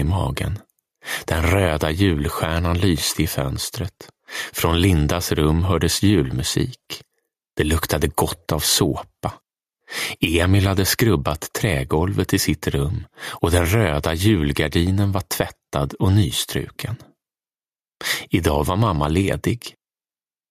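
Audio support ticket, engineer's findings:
Gain pumping, whole clip. Gain swing around 10 dB. Loud and soft passages pulled close in level, sound squashed. Likely input gain set far too high, with a fast limiter or compressor clamping every peak and releasing between them.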